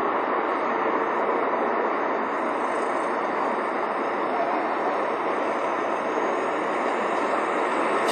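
WMA compression runs throughout the clip, from start to finish. Nothing is present above 12.5 kHz, and the audio has a ringing, washy quality with a hiss that swells and recedes along with the sound itself. This is likely a simple transform codec with long blocks, which smears quantisation noise across tens of milliseconds and drops weaker detail entirely. The damage is plainly audible and points to a low bitrate, around 48 kbps.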